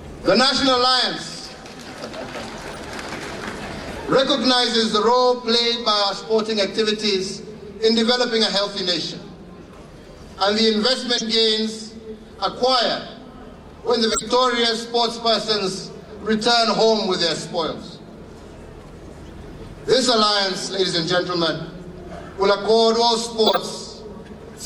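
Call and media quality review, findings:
Corrupt frame decoded: four chirp-like blips at 2.73–2.77 s, 11.18–11.23 s, 14.11–14.22 s and 23.44–23.57 s. Each is longer and louder than the last, rising from about -25 dBFS to near full scale. Decoder is playing damaged frames, where misread gains and codes put energy at the wrong frequencies. Spectrogram shows short off-band or broadband patches with frame-length edges. Waveform shows abrupt spikes unrelated to the surrounding envelope.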